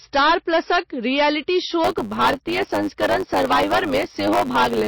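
From the first moment to the last, the speech is driven about 15 dB past what one stage could pass, so it suffers hard clipping. Roughly a tenth of all samples hit the ceiling and are sheared off. The flattened peaks produce a harsh, gritty fuzz on every louder syllable. On a waveform the tops and bottoms sit pinned in flat plateaus. On a spectrogram the clipped stretches throw vertical smears of harmonic energy far up the frequency range.

Also present throughout is a dull, watery quality with a swirling texture on sibilants. Above a fixed cutoff frequency there is nothing at all, which shows on a spectrogram as a hard horizontal shelf. Below it, the weaker detail appears as patchy, flickering blocks that come and go from frame to frame. The most likely cause is MP3 compression at a very low bitrate, somewhere near 27 kbps, where the encoder drops the treble and thins out quiet components.

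From 1.84 s to the end, a block size mismatch (truncated) sets in. One stage appears to write longer blocks than the next reads, fitting 512-sample blocks whose tails are discarded. This adds a steady 100 Hz buzz and makes the audio run 1.07 times faster while keeping roughly its normal pitch. On a waveform, small discontinuities appear every 10 ms. A spectrogram shows evenly spaced vertical ticks and a 100 Hz harmonic comb.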